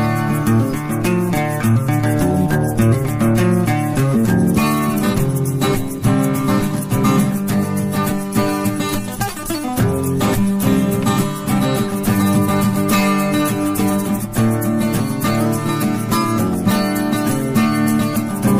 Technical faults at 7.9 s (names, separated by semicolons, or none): none